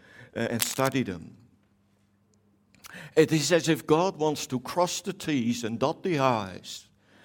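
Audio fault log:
0.59–0.95 s, cable scratch noise: for just over a third of a second a dense, ragged crackle rides over the speech, fairly loud and sitting only a little below the level of the voice. The bursts are uneven and rustling rather than a steady hiss, which is what a worn cable, connector or control likely produces when it is moved and its contact resistance jumps about rapidly, chopping noise into the signal.
6.72–6.78 s, compressed frames skipped: the speech lurches forward, losing roughly a tenth of a second of audio. A run of whole compressed frames was never decoded, either absent from the stream or rejected as corrupt, so playback resumes further on.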